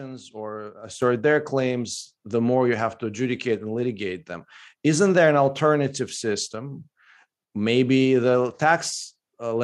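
A microphone volume step-up hits this speech clip at 1.02 s, just before "their claims the more": the call software judged the input too quiet and raised the device gain in one jump of about 7 dB, so voice and background both become abruptly louder together.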